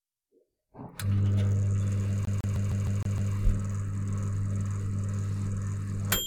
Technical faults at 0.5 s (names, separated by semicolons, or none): none